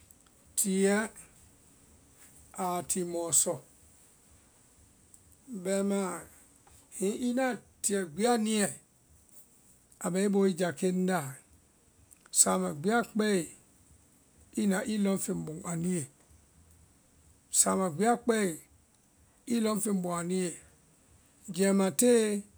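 Speech recording, with nothing technically wrong to report and no times or causes to give.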